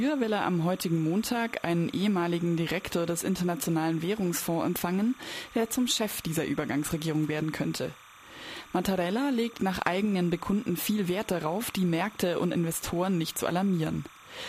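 A steady chirping warble, near 1 and 2 kHz and well below the sound, runs throughout: timecode bleed, with 30 frames-per-second linear timecode leaking in from an adjacent track or cable.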